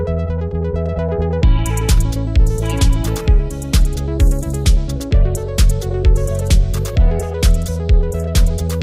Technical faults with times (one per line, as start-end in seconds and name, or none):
none